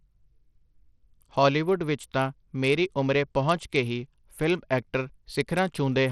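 Bluetooth SBC compression runs through this whole speech clip, with plainly audible damage. The likely cause is a starved SBC bit pool, pointing to roughly 80 kbps, leaving the upper sub-bands with few bits, so the treble flickers and gritty quantisation noise and aliasing ride on the voice.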